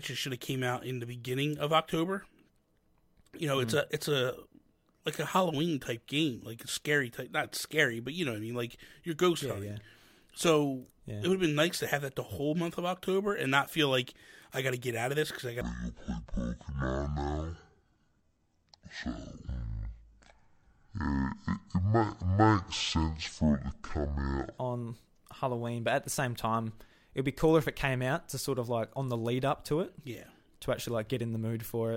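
It's a speech clip, and right after "this because I got" there's a section at the wrong speed from 15.61 to 24.58 s. It plays at half speed, so everything drops roughly ten semitones and drags, deep and slow, then snaps back. Most likely it was fitted to the wrong clock during editing or playback.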